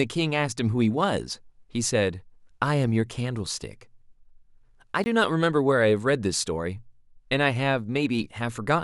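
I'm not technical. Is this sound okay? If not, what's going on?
No. There is a block of digital silence from 5.04 to 5.06 seconds: for 20 milliseconds the speech drops out completely and then returns. That happens when the playback program doesn't refill its output buffer in time and the missing stretch is filled with zeros. The sound stops and restarts abruptly instead of fading.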